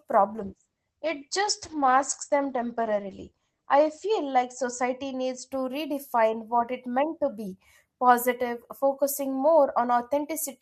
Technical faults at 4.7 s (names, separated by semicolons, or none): call bitrate drop